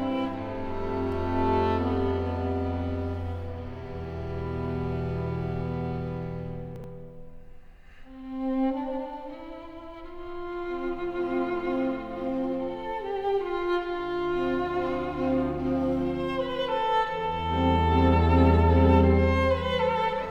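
Around 6.76 to 6.84 s there's a spot of chunks out of order: a 40 ms block lands one slot late, after the block that should follow it. Nothing drops out, but the swap leaves a brief jumbled stutter with three hard joins.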